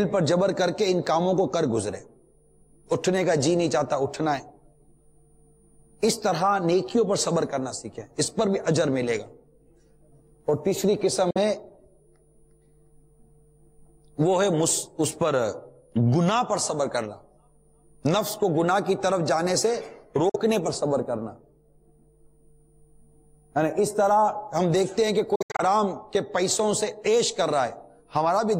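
Bluetooth dropouts, likely, at 11.31–11.38 s and 20.29–20.36 s: silences of about 46 ms where packets missed the headphones. At 25.35–25.61 s, gaps totalling about 160 ms scatter over 230 ms. Each time, sound resumes further on, as though it kept playing.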